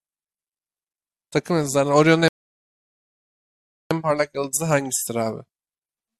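At 2.28 s the speech halts and the audio drops to silence until 3.91 s, a rebuffering stall. The player exhausted its downloaded audio and waited about 1.6 s for more to arrive, then picked up exactly where it left off, so nothing is skipped but 1.63 s of dead air is inserted. On a waveform this shows as a flat line across that span; a spectrogram shows a blank vertical band with clean edges on either side.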